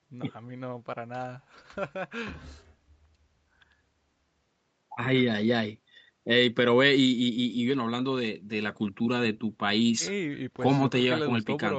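The speech shows no technical faults, with content stopping at about 8 kHz as expected from its Opus call path, and the lowest bass trimmed by the call's microphone processing.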